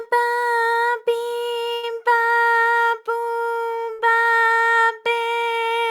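At 1.73 s, a burst of packet loss stretches the last sound into a smeared, fading tail for about 95 ms. Playback then resumes roughly 100 ms further on, with that stretch simply gone. The same happens at 3.93 s, with about 56 ms of fill and 60 ms lost. Unlike a plain dropout, there is no hard silence: the receiver keeps the preceding sound going and turns it down before skipping ahead.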